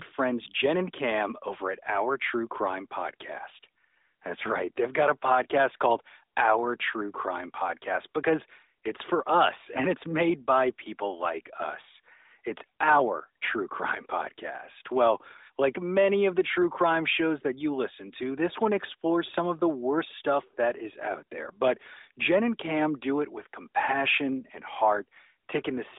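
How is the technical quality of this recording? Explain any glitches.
No glitches or faults heard.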